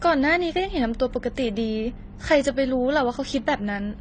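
Throughout, the speech was likely transcoding between lossy codecs, consistent with low-bitrate AAC and then HE-AAC. Both codecs' artefacts are heard together, with nothing above 9.7 kHz.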